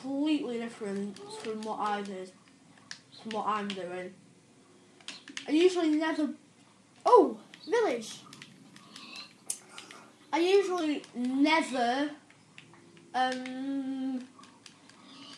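From 7.24 to 10.81 s there's a wrong sample rate fault: the audio runs about 1.09 times fast and sits roughly 1.5 semitones sharp, with speed and pitch rising together. That fits material recorded at 22 kHz being played back at 24 kHz without conversion.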